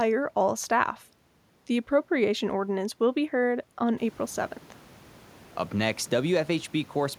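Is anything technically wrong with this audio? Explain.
No, nothing technically wrong is audible here.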